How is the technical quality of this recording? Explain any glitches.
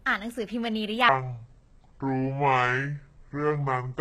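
Not great, to be honest: the whole thing carries obvious codec damage, and most of it runs at the wrong speed.

Throughout, the treble sounds synthetic and gritty, with s sounds turning metallic. That's likely HE-AAC compression: only the low band gets coded, and the top end is rebuilt by copying lower bands upward, which fits a very low bitrate of around 20 kbps.

From 1.09 s to the end, there's a section at the wrong speed: playback drops to 0.599 times normal, so the speech turns deep and dragged, roughly ten semitones lower. Speed and pitch fall together, likely from that stretch being played against the wrong clock.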